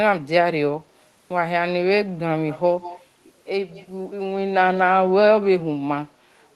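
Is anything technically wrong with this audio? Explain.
Yes. Echo leak at 2.48–2.59 s, 2.81–3.03 s and 3.71–3.88 s: a faint copy of the speech returns about 181 ms late, roughly 15 to 25 dB below it, likely from a loudspeaker echo canceller letting part of its microphone pickup through, so brief scraps trail the talker.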